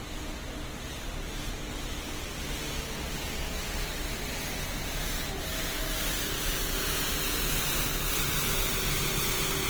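Opus compression runs throughout these sounds, from start to end: tones come out rough, grainy and noisy, plainly audible damage that likely comes from Opus in its music mode at a low rate near 16 kbps, filling starved bands with folded or noise content while keeping bandwidth up to about 20 kHz.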